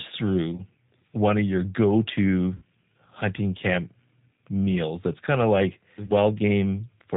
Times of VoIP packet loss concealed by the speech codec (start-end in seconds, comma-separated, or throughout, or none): 0.56-0.61, 2.56-2.63, 6.07-6.12